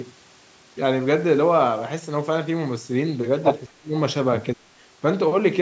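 From 3.67 to 3.94 s and 4.53 to 4.70 s the speech ducks by about 30 to 35 dB, likely speech suppressed in double talk: gain dips rather than packet-loss gaps.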